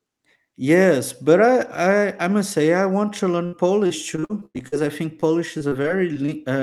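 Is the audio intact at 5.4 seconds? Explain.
No. Repeated packet loss (robotic sound) runs from 5.2 to 6.3 s, just after "I think". Seven short holes, the longest 34 ms, are each patched by extending the sound before it, so about 140 ms is lost and the speech turns choppy with pieces missing.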